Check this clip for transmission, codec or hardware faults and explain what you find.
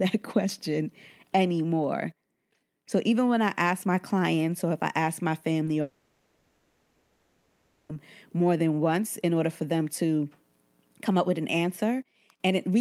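Two transmission faults sit close together around the midpoint of the speech.

At 5.65 to 5.69 s there is a brief smear, a tiny wobble where the sound seems to hang for an instant before blending back. This is short concealed packet loss. About 20 ms of audio did not reach the decoder in time. The receiver covered the gap by extending the preceding sound, voiced or noise-like, and then crossfaded back into the real signal. A short consonant here can be swallowed.

From 5.81 to 7.91 s the sound turns into a continued, synthetic tone or hiss that gradually decays. It never drops to true silence before the speech resumes, and what follows picks up later, with a chunk of content gone. This is a long network dropout, likely caused by roughly two seconds of packets failing to arrive. The concealment kept stretching the last received sound across the whole gap, so the missing audio was replaced rather than delayed.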